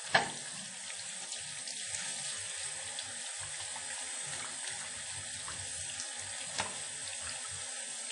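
WMA compression, running throughout, plainly damages this recording of sounds: nothing is present above 10.1 kHz, and a hiss that rises and falls with the material smears around each event, giving a ringing, washy quality. The likely cause is a transform codec with long blocks, where quantisation noise spreads over tens of milliseconds and weak spectral lines are dropped. The damage fits a first-generation WMA encoder at a low bitrate near 32 kbps.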